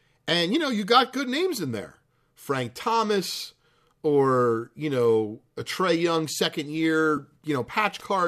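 At about 7.17 s there's a quick AAC frame loss with concealment: roughly 10 ms of audio drops out, which fits a single lost low-delay frame, and the decoder patches it from the preceding spectrum, so you get a brief smeared, noisy blip rather than a gap. The codec here is likely low-delay AAC.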